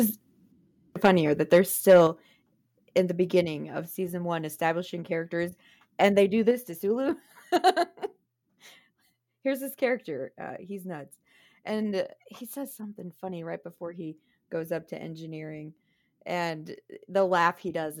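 Speech with microphone overload at 1.04–1.09, 1.53–1.58, 1.89–2.01 and 7.67–7.70 s: crackling, flattened peaks, likely from input gain driving the converter about 2 to 6 dB past full scale. Microphone volume stepped down at 1.06, 2.07, 3.45 and 6.51 s, with voice and background dropping about 2, 5, 3 and 4 dB, likely the call software cutting input gain after detecting clipping.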